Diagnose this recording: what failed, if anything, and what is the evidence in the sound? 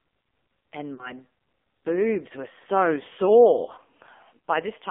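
The codec stage did the most damage here: this is AMR narrowband mobile codec audio throughout. The speech sits in a 250 Hz to 3.6 kHz band and sounds heavily buzzy and synthetic, which fits a low AMR-NB mode around 5.9 kbps, where a few pulses drive a crude vocal-tract model.

On the network or radio side, there are lost AMR speech frames from 0.94 to 1.13 s. The sound smears and sags, then comes back rough. That fits about 40 ms of dropped frames, with the decoder repeating its last pitch and filter settings at falling gain.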